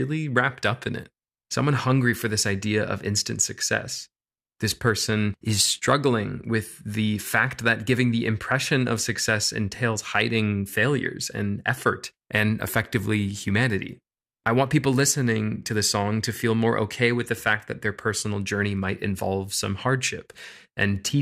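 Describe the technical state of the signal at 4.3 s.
At 4.3 s the speech signal is intact, with no audible fault at that moment.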